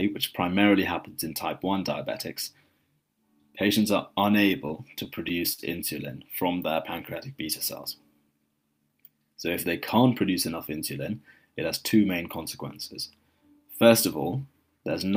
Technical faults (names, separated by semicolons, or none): repeated stalls (stutter)